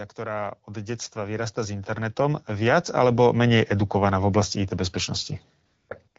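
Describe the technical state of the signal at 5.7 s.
At 5.7 s you're in a stretch of AMR comfort noise running from about 5.65 to 5.89 s, roughly 240 ms. The phone decided the talker had gone quiet and stopped sending speech frames, so the far end filled the gap with synthetic noise built from a rough sketch of the background's level and spectrum. What you hear is the real room tone swapped for a smooth, steady hiss that drops in and out, with the wideband HD Voice codec carrying the signal either side of it.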